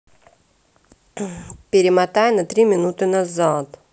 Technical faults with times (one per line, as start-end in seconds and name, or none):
none